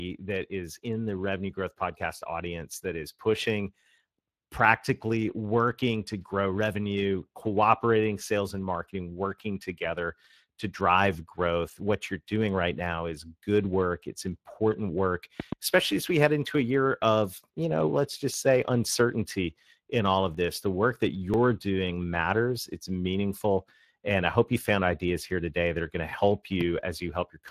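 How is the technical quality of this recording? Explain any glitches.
The recording has three kinds of fault: codec damage throughout, two loud pop events, and a run of regular dropouts.

Speex codec (whole clip): Low-bit CELP coding, fitting roughly 22 kbps, leaves the speech hoarse and grainy, with nothing above 15.3 kHz. Unlike broadband noise, it follows the speech itself.

Loud pop (15.40–15.55 s): After "important work", two sharp pops about 15 dB above the speech, likely from a plug, switch or static discharge, sit over the speech, which carries on underneath.

Loud pop (26.61–26.63 s): After "are going to help", a single pop about 10 dB up, likely the same kind of voltage spike. Its isolation distinguishes it from the periodic ticks.

Periodic USB or driver dropouts (18.34–24.34 s): Between "of you know let's" and "you found ideas here", about seven ticks fall exactly once per second. 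Each one marks roughly 1 ms of skipped audio, lost when a background task blocks the bus. The strict one-second spacing separates them from random pops.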